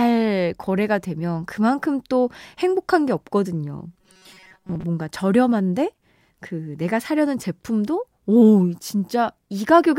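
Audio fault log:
3.94–4.84 s, robotic sound from repeated short buffers: the speech turns into a stiff, metallic buzz pitched at 188 Hz that only loosely follows the words. The likely cause is audio arriving too seldom, so playback loops a tiny chunk of about 5.3 ms while most of the real signal is skipped. A spectrogram shows flat, evenly spaced harmonics of 188 Hz replacing normal formant movement. The waveform shows one short cycle stamped out repeatedly.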